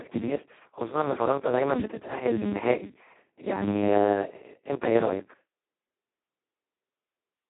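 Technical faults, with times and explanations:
Throughout, Speex codec: the speech was squeezed through Speex at an extremely low setting, a sound that points to a bitrate around 2 kbps, near the vocoder-like end of its range. With so few bits left to describe the excitation, voicing is rebuilt coarsely, so the speech comes out hoarse, buzzy and robotic, with heavy coding damage. The line band runs from about 150 Hz to 3.6 kHz, and nothing is left above 3.9 kHz, leaving a muffled, narrowband sound.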